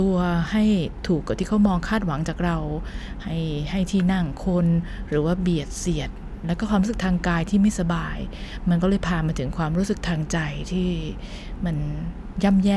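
Nothing to flag here: the speech runs along without any technical fault turning up at any point.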